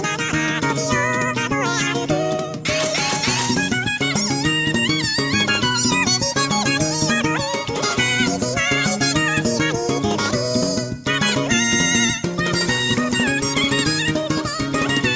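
Wrong sample rate affects the audio for its whole length: every sample runs twice as fast as it should, so speed doubles and pitch rises a full 12 semitones, an octave. That fits 8 kHz material being played back at 16 kHz without conversion.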